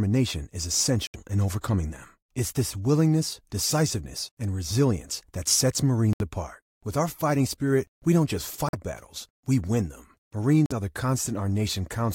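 The speech drops out briefly four times, and it's most likely a Bluetooth dropout each time. The first hole is at 1.07 s, about 90 ms, just before "in overcoming them". Another hits at 6.13 s, also about 90 ms. Then come two shorter gaps of about 65 ms: at 8.69 s, between "spirit we don't just" and "battles we win them", and at 10.66 s, right before "are the". Packets arrived too late and were discarded, so the sound cuts out and resumes further along, as if it kept playing underneath.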